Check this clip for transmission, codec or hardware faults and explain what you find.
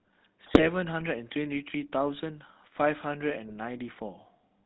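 The speech has two faults: coding damage throughout and two bursts of corruption.

GSM full-rate codec, throughout: pulse-driven vocal-tract coding, consistent with 13 kbps full rate, leaves nothing above 4 kHz and a steady buzzy, gravelly roughness. Unlike bit errors, it never varies.

GSM bit errors, 0.42–0.62 s and 3.48–3.56 s: corrupted filter, pitch or gain values distort frames into sudden squawks and gargling. The first burst is denser, suggesting a higher error rate.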